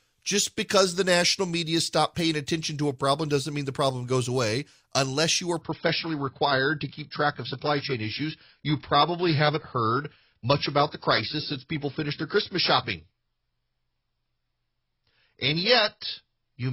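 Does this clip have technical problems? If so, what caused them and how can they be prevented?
Yes. From 5.6 s, right after "you are", to the end, the speech switches abruptly to an adaptive stream at a lower bitrate. There is no gap, but nothing is left above about 5.5 kHz, and coding artefacts rise. The player dropped to a lower-quality rendition when throughput fell, and the sound fits a step from roughly 96 kbit/s AAC down to about 16 kbit/s. Prevention: give the connection more headroom, or set a higher minimum rendition and a larger buffer in the player.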